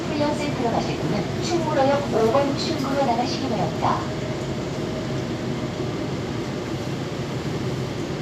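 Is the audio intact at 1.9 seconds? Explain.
Yes, the audio is intact at 1.9 seconds, with no dropout, click, distortion or other fault at that moment.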